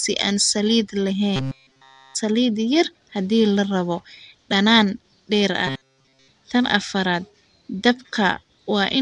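From the start, likely Nellymoser compression: blocks coded with too few bits leave weak bands filled with noise, so the speech sounds rough, hissy and smeared underwater, with nothing above 10.6 kHz. After "si aan saliid", from 1.36 to 2.15 s, and after "la rabo dhanaan dheer", from 5.67 to 6.28 s, playback was likely starved and kept repeating one short buffer of about 7.5 ms instead of new audio. This is robotic sound from repeated short buffers: the speech turns into a rigid, metallic buzz at 133 Hz.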